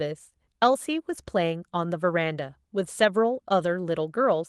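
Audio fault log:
No faults logged for this speech recording; the Opus encoding at 24 kbps in hybrid fullband mode leaves only light coding traces.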